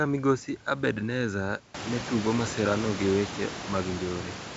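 Nothing here counts as a system fault: the speech sits in its wideband telephone coding with nothing above about 7.7 kHz, and the background noise that climbs by about 21 dB at around 1.5 s, staying some 12 dB beneath the speech after that, belongs to the room itself.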